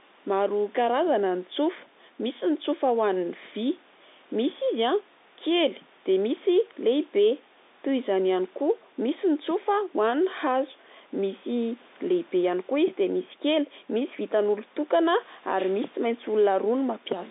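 No technical faults occur at any point in this speech recording, which comes over an ordinary telephone line.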